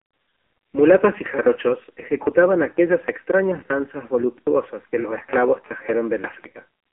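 AMR narrowband mobile codec damage runs throughout: speech is confined to roughly 300 Hz to 3.4 kHz, with buzzy, synthetic pulse-modelled voicing that points to a low bitrate near 5.9 kbps.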